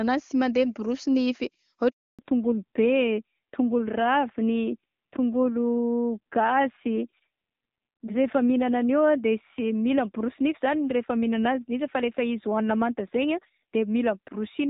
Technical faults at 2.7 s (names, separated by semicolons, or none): fallback to narrowband